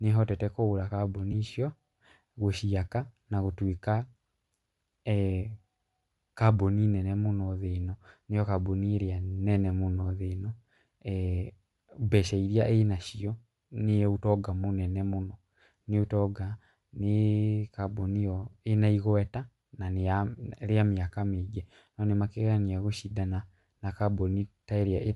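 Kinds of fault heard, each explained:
Bluetooth LC3 compression, throughout: the speech has a plainly audible breathy, grainy edge in its upper range, likely from LC3 coding, where a transform codec zeroes parts of the upper spectrum and fills the gaps with noise. The degree of damage fits a bitrate around 48 kbps with 10 ms frames.
Lost LE Audio frames, 1.32 to 1.34 s: just after "nĩĩhotete kugũra" comes a brief noisy smear, which points to a single 10 ms frame that never arrived. The decoder covered it by reusing the previous spectrum with randomised signs, so a short burst of grainy noise replaces the actual sound.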